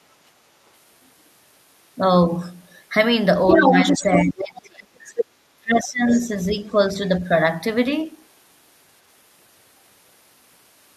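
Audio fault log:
3.47–4.3 s, 4.57–4.61 s, 5.07–5.25 s and 6.07–6.28 s, other side's voice leaking through: a second voice cuts in, first about as loud as the main speech, then fainter, from about 5 to 25 dB down. It is likely loudspeaker echo the echo canceller failed to remove.
3.55–3.73 s, 3.93–5.1 s and 5.57–6.58 s, speech suppressed in double talk: the speech dips briefly by a few dB, then sinks deeply, by roughly 30 dB and then 20 dB, for about a second each time. The likely cause is the canceller turning everything down while both sides overlapped.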